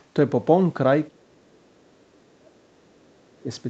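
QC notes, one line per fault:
0.00 to 0.04 s, other side's voice leaking through: a brief, very faint trace of a second voice sits under the opening, roughly 40 dB below the speech. This is likely loudspeaker echo that the canceller failed to fully remove from the microphone.
1.08 to 3.49 s, speech suppressed in double talk: the voice dips across this stretch, for about two seconds in total, at worst sinking by something like 35 dB. Likely the echo canceller, unable to separate talker from echo while both sides spoke, turned everything down.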